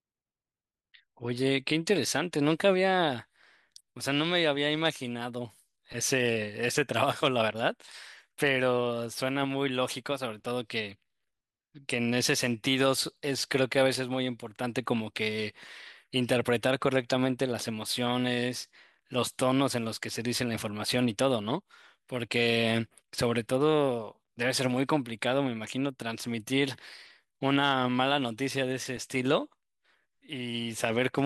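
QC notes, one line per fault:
28.97 s, block of digital silence: roughly 3 ms of the speech signal was replaced by zeros, the kind of gap left when an output buffer goes unfilled for one short stretch. The waveform drops straight to silence and jumps back with no fade, so both edges are abrupt discontinuities. At about 3 ms the hole is too short to register as a pause and is heard as a tick or dip in the speech.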